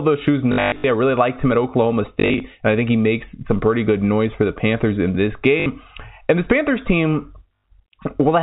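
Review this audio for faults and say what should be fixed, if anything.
Packet loss with last packet repeated occurs four times: 0.52–0.84 s, after "those shoes" and before "I really liked him", with runs up to 120 ms; 2.2–2.4 s, just before "and I think he"; 5.6–5.66 s, after "in this"; and at 7.60 s. Each gap is filled by replaying the previous packet, so the longer runs buzz at about 50 Hz, which fits 20 ms packets. A silent dropout would leave a hole instead of this robotic stutter. The G.711 band limit under 4 kHz is a separate, expected trait. A jitter buffer with proper loss concealment, or forward error correction, would prevent it.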